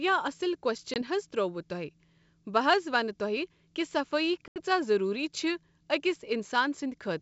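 Packet loss on an ADPCM call occurs at 0.94 to 1.02 s (a 20 ms gap, about one packet) and 4.48 to 4.61 s (80 ms, roughly four packets). Each silent hole leaves the decoder's predictor and step size mismatched, so the speech resumes with brief distortion before settling.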